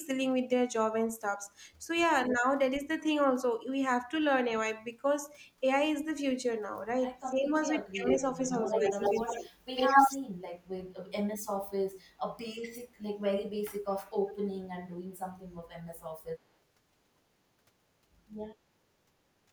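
From 7.29 to 9.49 s the speech dips by up to about 15 dB, losing about a second in pieces, likely speech suppressed in double talk as the canceller ducks both sides. An echo leak overlaps from 8.04 to 9.42 s, a 94 ms delayed copy at about the speech's level, likely residual loudspeaker echo. It returns from 9.76 to 10.17 s about 10 dB louder than the speech. At 15.35 to 15.46 s a brief double-talk suppression drops the speech by about 20 dB.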